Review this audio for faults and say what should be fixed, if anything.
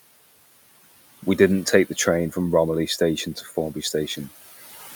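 Noise suppressor artifacts run through the whole clip. The suppressor pulls the room noise down by about 16 dB between phrases, then lets it rise under the speech. Prevent it with gentler, slower-acting suppression.

Speech cut by the noise suppressor occurs from 3.35 to 3.56 s. The suppressor mistook quiet speech for noise and lowered it by up to about 13 dB. Roughly 150 ms sounds swallowed and faint. Prevent it by raising the suppressor's speech-detection sensitivity.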